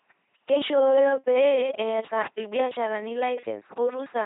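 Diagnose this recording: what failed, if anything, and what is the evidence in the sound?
The codec stage failed: the speech was coded with an LPC-10 vocoder, which rebuilds each frame from a ten-pole filter excited by pulses or noise. Throughout, it sounds heavily buzzy and robotic, with nothing above 3.8 kHz, which fits 2.4 kbit/s coding.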